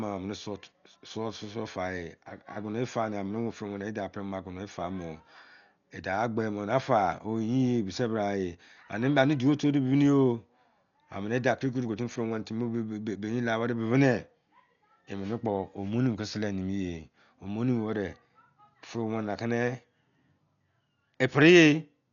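From start to end the speech sounds dull and band-limited, with nothing above about 6.9 kHz, and a rough, fluttering noise clings to voiced tones. This is likely Dolby Digital compression at a starved bitrate, around 48 kbps, where many frequency lines get no mantissa bits and are filled with dither noise.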